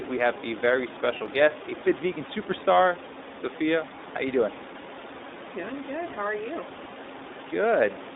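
Throughout, the speech carries the iLBC codec's narrowband sound: nothing passes below about 250 Hz or above 3.7 kHz, and each short frame is coded on its own, leaving a plainly audible rough, synthetic edge. Unlike a smoother narrowband codec, that grain doesn't settle between frames. The pattern fits iLBC's 20 ms mode at roughly 15 kbps.

At 1.18 to 1.21 s, one 20 ms frame is lost. The decoder fills it by repeating the last pitch cycle blended with noise, so the gap sounds like a brief, slightly buzzy held vowel. Because iLBC frames stand alone, the voice recovers at once, with no smeared tail. The room noise sits about 12 dB below the speech.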